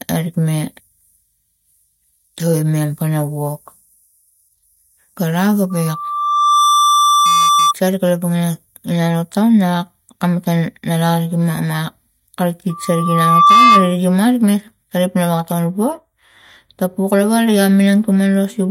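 A single 1.2 kHz tone swells over about a second into loudspeaker feedback squeal from 5.70 to 7.74 s, then again, louder and well above the speech, from 12.69 to 13.96 s. The microphone is picking up its own loudspeaker, and the loop gain exceeds unity at that frequency.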